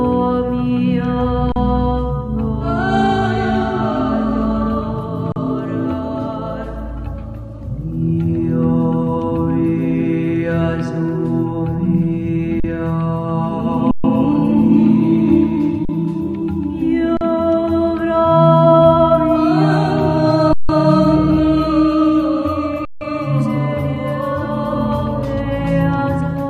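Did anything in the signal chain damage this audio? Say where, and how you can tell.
Yes. An underrun with held sample in the output buffer: the waveform freezes flat at 1.52, 5.32, 12.6, 13.91, 15.85, 17.17, 20.53 and 22.85 s, mostly for 40 ms, but for 130 ms at 13.91 s and 160 ms at 20.53 and 22.85 s. The converter holds its last value, then playback resumes softly where it stopped, with no audio skipped.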